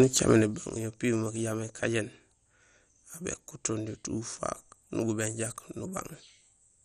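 Throughout the speech, nothing is present above about 13.7 kHz, and the remaining bands sound coarse, with a gurgling, granular edge and upper detail flickering in and out. This points to heavy MP2 compression, likely at a low bitrate near 56 kbps.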